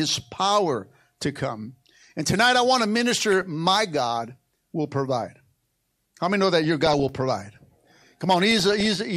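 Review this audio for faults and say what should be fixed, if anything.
There's DAB burbling at 3.32 to 3.43 s, 6.64 to 7.03 s and 8.51 to 8.95 s. Weak reception let bit errors slip past error correction into the MP2 data, so individual sub-bands get short noise blips or jump in level, giving a burbling sound over the speech. A stronger signal or better antenna placement should sort it.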